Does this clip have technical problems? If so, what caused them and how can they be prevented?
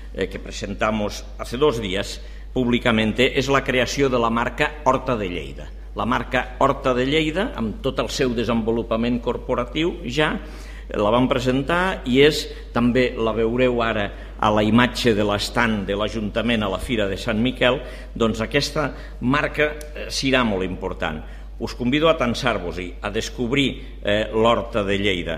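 No, this clip has no technical problems, so there is nothing to cause or prevent.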